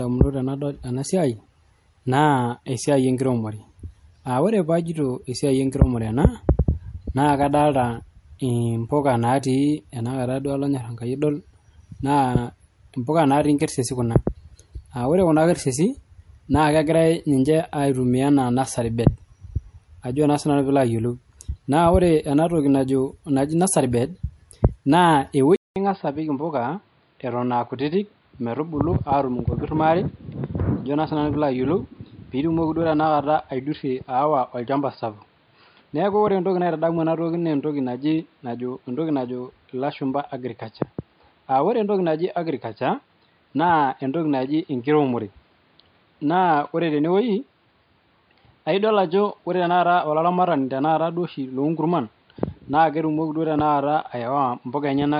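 From the start, the speech carries the swirly, watery smearing and muffled detail of heavy MP3 compression, which fits audio first encoded at roughly 50 kbit/s. It is likely low-bitrate audio saved at a high bitrate: the re-encode at around 192 kbit/s cannot restore what was discarded.

At 25.56 s the sound drops out for about 0.2 s, then returns duller, somewhat quieter and boxier, with nothing above 4.9 kHz and a faint new background noise well below the speech. This is likely the input switched to a poorer device, one with a narrower band and its own noise.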